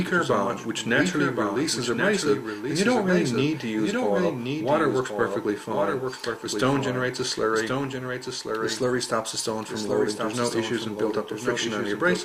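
Throughout, a doubled audio track: a full-band copy trails about a second behind, roughly 5 dB quieter, without decay or room colour, unlike echo, likely from a second, slower capture path.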